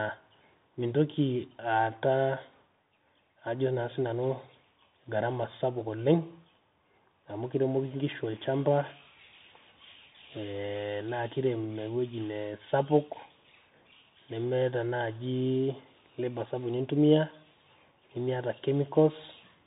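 Throughout the speech, the Bluetooth CVSD headset codec narrows everything to below 4 kHz, consistent with a 64 kbps one-bit delta stream. Its adaptive step lags loud high sounds, so s sounds turn scratchy over granular hiss. A spectrogram shows a hard ceiling at 4 kHz and a speckled noise floor.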